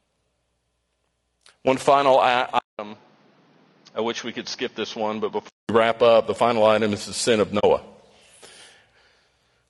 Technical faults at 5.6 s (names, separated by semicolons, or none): low-delay AAC compression; input switched to a poorer device